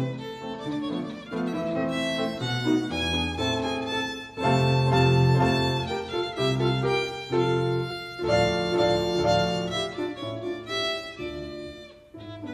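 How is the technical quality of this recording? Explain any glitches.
There is one glitch, at 7.90 s, where compressed frames were skipped. A stretch of the encoded stream never reached the output, either because it was missing from the file or because the decoder rejected it as corrupt. Playback jumps forward by roughly 20 ms of audio, with the sound seeming to lurch ahead for an instant.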